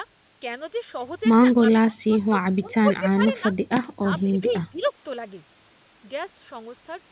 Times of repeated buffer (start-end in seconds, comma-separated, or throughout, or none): none